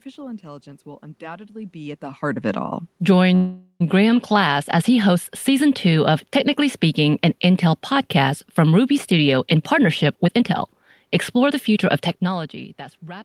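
Just after "heart of it all", from 3.35 to 3.82 s, the speech stops moving forward and the last sound hangs on as a fading buzz, ending in about 60 ms of silence before the talker resumes exactly where they left off. This is a call audio freeze, likely caused by delayed packets draining the jitter buffer. The receiver filled the wait by extending the final sound, so roughly 0.45 s of delay was inserted and nothing was lost.

From 9.18 to 12.33 s the talker sounds rushed, running at about 114% of normal speed while the pitch stays unchanged. This is a jitter buffer speed-up. After a backlog of late audio built up, the receiver trimmed it back toward its target delay by repeatedly cutting out tiny slices one or a few pitch periods long. Altogether about half a second was removed, which compresses the timing without raising the voice's pitch.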